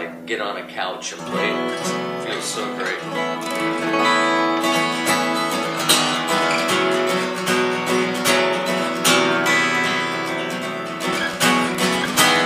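Wi-Fi interference runs from 11.03 s to the end of the audio at 12.46 s: a steady ticking roughly ten times a second, about 25 dB below the signal. A nearby Wi-Fi radio's beacon, repeating every 102.4 ms, is being rectified by the audio circuitry.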